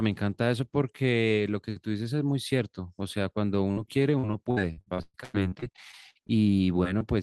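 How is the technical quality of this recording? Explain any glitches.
The recording has three packet-loss glitches, all in the second half of the speech. The worst is a long choppy stretch near the end.

At 3.71 to 3.78 s there is a burst of packet loss. The sound stops moving and briefly turns into a held, fading tone or hiss, then jumps ahead. A run of packets was lost or arrived too late. The receiver stretched the last good sound for about 50 ms while turning it down, and roughly 60 ms of real audio was skipped.

From 4.18 to 6.31 s the speech becomes choppy, with repeated packet loss giving a robotic sound. More than a dozen short holes fall close together, the longest about 120 ms. Each one is patched by continuing the preceding sound, so about 30 percent of the stretch is synthetic filler. Roughly 0.66 s of real audio never arrives.

At 6.99 to 7.03 s a brief smear marks short concealed packet loss. 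About 20 ms failed to reach the decoder in time. The receiver extended the previous sound over the gap and blended back into the real signal. The hole is small enough that it reads as a wobble rather than a dropout.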